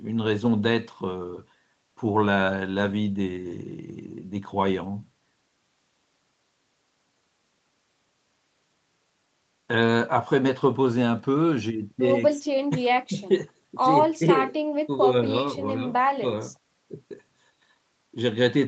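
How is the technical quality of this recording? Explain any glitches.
No audible glitches or faults.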